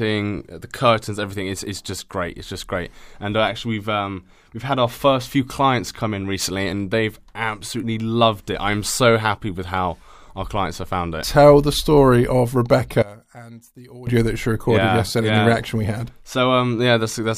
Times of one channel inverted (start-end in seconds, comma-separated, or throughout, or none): 13.02-14.07